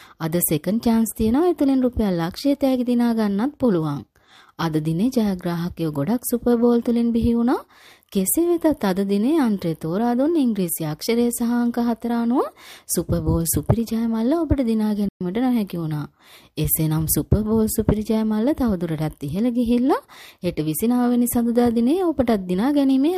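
At 15.09 s the sound cuts out for about 120 ms, to 15.21 s, then resumes: a playback stall, likely the player starving for data or its thread being blocked. The waveform shows a flat gap; the spectrogram shows a clean vertical blank band.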